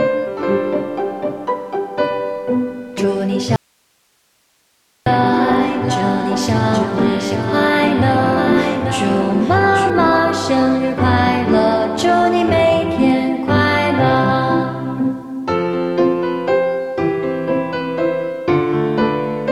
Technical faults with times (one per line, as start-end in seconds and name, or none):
2.98-9.90 doubled audio track
3.56-5.06 audio dropout to a faint residue